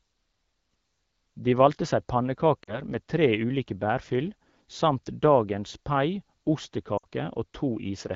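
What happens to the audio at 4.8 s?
Nothing goes wrong at 4.8 s: the speech there comes through intact, carried by the AMR wideband (HD Voice) codec at 12.65 kbit/s with no fault at that moment.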